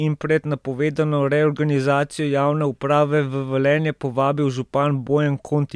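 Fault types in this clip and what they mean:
No technical faults detected in this speech recording.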